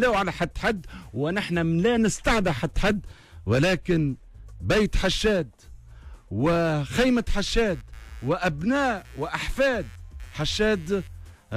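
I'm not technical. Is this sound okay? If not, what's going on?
No. Computer activity noise starts at about 7.46 s and runs to the end at 11.57 s. A faint buzz, pulsing roughly a hundred times a second, sits underneath the sound. It happens when the computer's processor, graphics card or mouse suddenly draw more or less power. That disturbs the electrical ground the audio circuit shares with them, so the buzz follows what the computer is doing rather than the sound itself.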